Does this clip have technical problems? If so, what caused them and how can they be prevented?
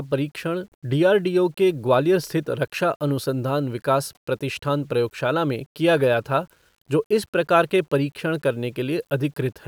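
Yes. Throughout the clip, the speech was likely reduced to a low bit depth without dither, rounded onto a coarse grid that fits about 9 bits. The rounding error follows the signal, sitting only around 45 dB below it, so quiet passages turn gritty and the softest sounds sputter or vanish. Keeping at least 16 bits, and applying dither whenever word length is reduced, prevents this.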